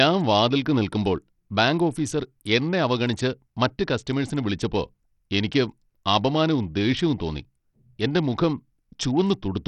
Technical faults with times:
0.00-9.67 Bluetooth SBC compression

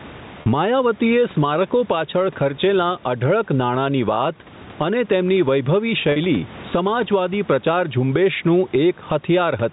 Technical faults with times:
0.00-9.72 gain pumping
0.42-0.46 packet loss with pitch repetition
6.12-6.16 packet loss with pitch repetition

